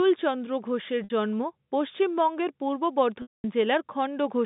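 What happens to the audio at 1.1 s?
Right around there you've got packet loss with pitch repetition, running from 1.04 to 1.10 s, just before "জন্ম পশ্চিমবঙ্গের পূর্ব". About 60 ms of audio went missing, which fits three 20 ms packets. The receiver papered over it by looping the last pitch cycle, so you hear a brief held buzz that fades out toward silence over the gap. Then the speech cross-fades back in.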